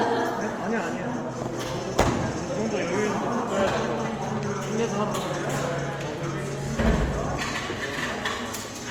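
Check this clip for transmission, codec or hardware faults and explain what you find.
One fault runs through the whole clip: compression damage that sounds like Opus at a low rate.

Opus compression, throughout: the audio still reaches about 20.2 kHz, but too few bits leave the upper bands filled with folded or noise-like content rather than detail. Tones come out noisy, rough and grainy, which likely points to music-mode Opus at around 24 kbps.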